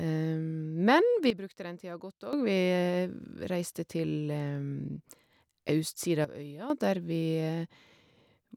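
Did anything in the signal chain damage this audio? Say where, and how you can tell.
Yes. A sudden gain jump occurs twice, from 1.30 to 2.33 s and from 6.25 to 6.70 s. The speech and the background noise drop together by about 14 dB, then about 11 dB, and snap back with no fade at either edge. Because the noise floor moves in lockstep with the speech, the change was applied to the whole digital signal, likely a gain setting switched in the driver or call-processing stage without a ramp.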